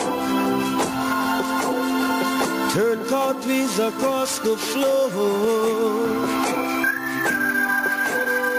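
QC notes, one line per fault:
throughout, gain pumping: the gain ducks under each loud sound and recovers between them. Loud and quiet passages sit unnaturally close in level, and the whole clip feels squashed. The swing is large, roughly 15 dB. The likely cause is input gain set far too high, with a fast limiter or compressor clamping down on each peak and releasing between them.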